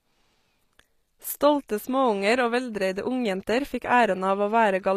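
A speech recording that has likely been through HE-AAC compression at a low rate, consistent with roughly 24 kbps, for its whole length. The encoder keeps only the lower spectrum properly coded and fills in the top by copying lower bands upward under a coarse envelope, so the treble is synthetic rather than original. The damage is plainly audible: s sounds come out gritty and metallic, with upper harmonics that don't line up, and nothing at all remains above 14.9 kHz.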